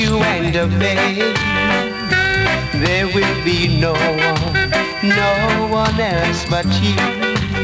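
Gain pumping runs throughout. The gain swings by about 10 dB, likely from excessive input gain driving a fast limiter.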